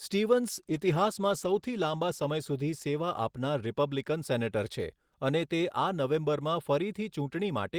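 From 0.51 s to 3.87 s the speech goes through a call bitrate drop: the encoder falls back to far fewer bits, consistent with a fall from 32 to 14 kbps, and sounds muffled, rough and watery, worst for about 1.3 s, recovering just before "સેનેટર છે અને તે". Unlike packet loss, the sound never breaks off.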